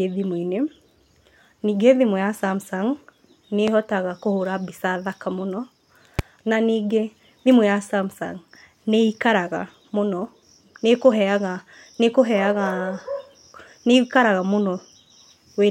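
At 3.68 to 3.70 s, a loud pop cuts sharply across the speech. It peaks roughly 15 dB above the speech, and the speech continues beneath it. The same single pop recurs at 6.19 to 6.22 s. Each is likely a brief voltage spike, possibly from static or a switch.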